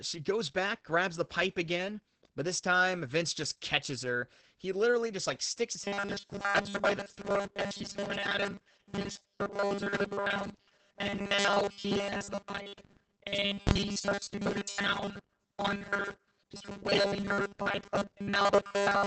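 Throughout the clip, Opus voice compression at a very low bitrate, which fits about 10 kbps in its SILK linear-prediction mode, codes the excitation coarsely and cuts everything above about 8.7 kHz. The damage is heavy: speech sounds muffled and hoarse.

From 5.80 s, right after "literally just like sticks", to the end, the clip has robotic sound from repeated short buffers, likely because new audio arrived too seldom. Roughly 70 percent of the audio is repeated 5 ms slices, which imposes a rigid, metallic 200 Hz buzz.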